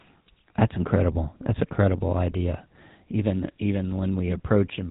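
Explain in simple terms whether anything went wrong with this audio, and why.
The whole recording sounds buzzy and gravelly, as if the speech were coming through an old mobile phone, with no crisp high end. That is the GSM full-rate codec: it rebuilds speech from a simple throat model driven by coarse pulses, and discards everything above 4 kHz.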